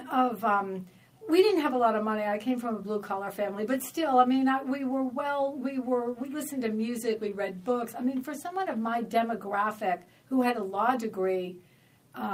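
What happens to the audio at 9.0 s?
At 9.0 s the sender's audio clock is running roughly 2 percent slower than the receiver's. This clock drift between sender and receiver means the jitter buffer keeps draining a little faster than it refills, so the receiver cannot hold a steady flow. It has to stretch what it gets to avoid running dry, and the whole stream plays back at about 98 percent of its proper pace.

The receiver handles the shortfall with repeated timing corrections from 0.17 s to 12.09 s, a span that covers the 9.0 s mark. It repeats short pieces of the sound at uneven intervals, and every edit lengthens rather than shortens, so the clip gains something like a fifth of a second over that stretch. Around 9.0 s this is heard, if at all, as slight hiccups or an unsteady tempo rather than a clean cut.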